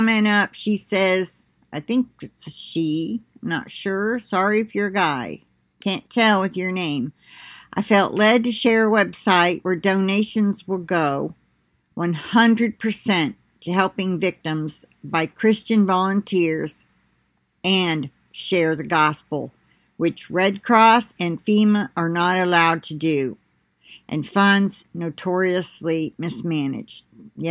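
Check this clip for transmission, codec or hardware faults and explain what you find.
No transmission, codec or hardware faults.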